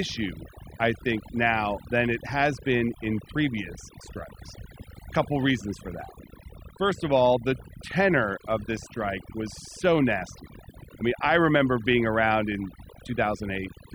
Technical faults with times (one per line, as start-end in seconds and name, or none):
0.00-13.95 overdone noise removal